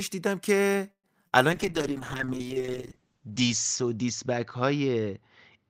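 A speech recording that stalls between 0.91 and 1.07 s, where the sound trails off and sits near-silent for about 90 ms before resuming with nothing lost. This is likely a call audio freeze, with late packets draining the jitter buffer and adding about 0.12 s of delay. A brief smear follows at 1.28 to 1.35 s, short concealed packet loss where roughly 40 ms never arrived and was patched by extending the preceding sound. From 1.52 s to the end the speech turns rough, watery and muffled. This is a call bitrate drop, with the encoder pushed from 48 to 8 kbps and the top of the band falling from 20 kHz to 8 kHz, holding at its lowest for about 1.7 s.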